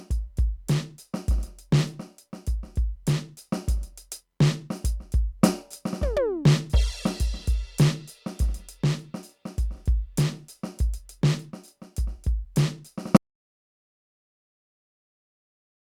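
The music cuts off abruptly at 13.17 s and stays silent to the end, an audio dropout to silence. Unlike a fade-out or noise gate, there is no decay or residual room tone, so the input was likely lost while recording continued.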